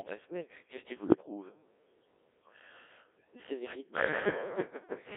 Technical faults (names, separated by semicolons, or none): Codec 2 vocoder; bit errors on digital voice radio